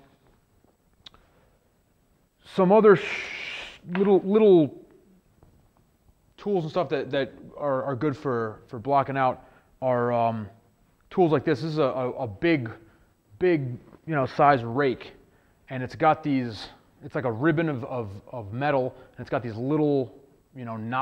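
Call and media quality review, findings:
Crude rate conversion, 6.65–8.56 s. Gritty inharmonic fizz tracking loud, high content, about 50 dB below signal. Fits unfiltered linear interpolation from 44.1 kHz to 48 kHz.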